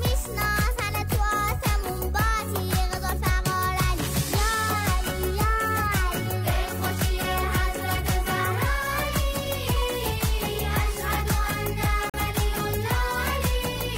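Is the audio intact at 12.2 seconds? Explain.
No, not quite. There's a digital broadcast dropout from about 12.10 to 12.19 s, so 12.2 s lands right as the sound comes back out of the hole. The receiver lost a frame's worth of data, or a frame failed its checksum, and it muted until good frames arrived again. You hear a sudden short cut to silence, roughly 0.09 s long. The missing stretch fits a single lost frame of about 43 ms, and that part of the programme is simply gone.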